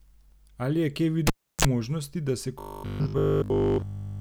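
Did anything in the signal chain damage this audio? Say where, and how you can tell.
Yes. In the analogue wiring, a cable pulled and plugged in at 1.27 to 1.65 s: a pop, about 330 ms of near silence, a 34 ms burst of 50 Hz mains buzz as the tip touches, then a second pop. The spectrogram shows two vertical broadband lines bracketing a gap with a brief hum stack.

From 2.60 to 4.20 s the speech turns into robotic sound from repeated short buffers, a rigid metallic buzz locked to 50 Hz that loosely tracks the speech. The likely cause is the driver or buffer stage repeating a 20 ms block. The waveform shows near-identical 20 ms cycles, and the spectrogram shows harmonics fixed at 50 Hz spacing.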